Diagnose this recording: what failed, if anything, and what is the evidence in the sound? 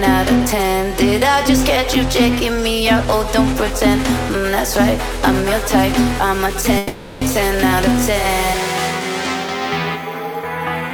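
A long network dropout, likely at the network stage, runs from 6.77 to 7.23 s. About 440 ms of audio never arrived and the receiver concealed the whole gap, stretching the last received sound into a fading continuation rather than falling silent. On a spectrogram the bands smear into flat, repeating horizontal streaks that weaken across the gap. The waveform shows a decaying, periodic envelope, then an abrupt resumption that skips the lost material.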